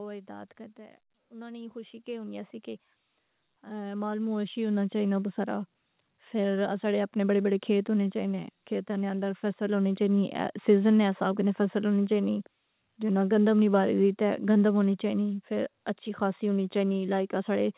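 Automatic gain rising affects this speech recording: the gain control judged the input too quiet and raised its gain by about 18 dB between 0.26 and 11.86 s, so voice and background swell together until the level settles just before "ہونی چائني". The call path's 4 kHz band limit is audible, consistent with a narrowband G.711-style codec.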